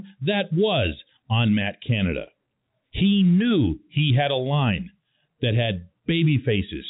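Nothing goes wrong in this speech recording; it simply carries the narrow telephone sound of G.711 coding, with nothing above about 3.8 kHz.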